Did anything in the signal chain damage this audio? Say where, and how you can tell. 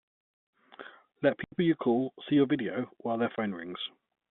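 Yes, packet loss filled with silence at the network stage: flat silent gaps at 1.44–1.52 s, before "you call see your", and 3.36–3.38 s, after "your video while their". The 80 ms and 20 ms holes fit 20 ms packets. On a spectrogram they show as blank vertical bands with hard edges.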